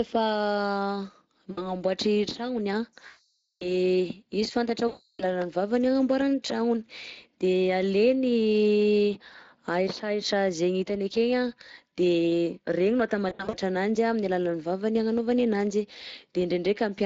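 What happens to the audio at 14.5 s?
Speex codec damage is present at 14.5 s, as it is across the whole clip. This CELP speech codec models the voice with a predictive filter plus a coarsely coded excitation, and the plainly audible roughness and hoarse graininess point to a moderate bitrate of roughly 20 kbps.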